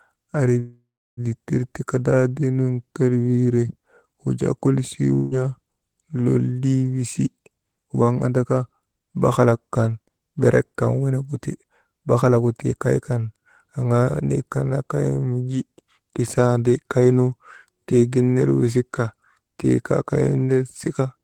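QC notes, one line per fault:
0.59–1.20 s, call audio freeze: Packets were likely delayed in transit and the jitter buffer ran dry, so the last sound is stretched into a fading buzz that settles into about 0.32 s of silence. Speech resumes at "ditir kadaadiinun kelwiire wujaa" with nothing lost, just a 0.58 s pause inserted.
5.15–5.34 s, long network dropout: A stretch of audio likely never reached the receiver, which covered the hole with about 0.17 s of decaying buzz from the preceding sound. When speech returns, roughly 0.16 s of it is missing, giving an abrupt jump.
7.33–9.61 s and 20.86–21.23 s, jitter buffer speed-up: The buffer held more audio than its target, so the receiver repeatedly trimmed short pitch-period slices to reduce delay. Speech runs at 109% and then 113% of normal speed at unchanged pitch, sounding hurried. Around 0.2 s and then around 50 ms are dropped.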